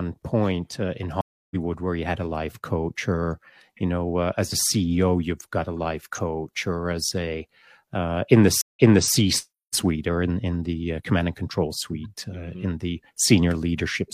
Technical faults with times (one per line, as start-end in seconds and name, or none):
1.21-1.56 stream reconnect
8.61-9.13 stream reconnect